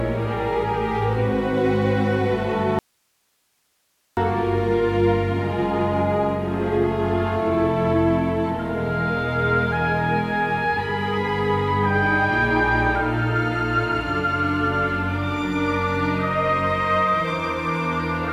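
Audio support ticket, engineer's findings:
Audio dropout to a faint residue, 2.79–4.17 s: abrupt cut to hiss about 45 dB down, not a fade. Likely upstream source loss, downstream path live.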